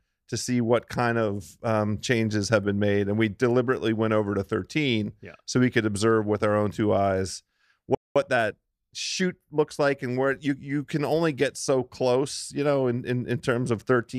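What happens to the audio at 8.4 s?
Right after "our own two eyes", from about 8.16 to 8.98 s, you get a time-compressed catch-up. The player is clawing back a backlog after a stall by snipping out tiny slices and cross-fading the joins, so the speech runs about 1.25 times fast but keeps its normal pitch. It comes across as a brief hurried rush, settling again by "looks like and where".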